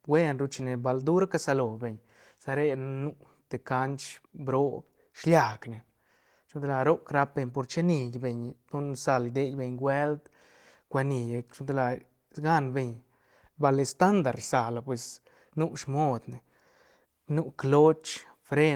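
Listening to this speech recording, nothing stood out as a technical problem at any point.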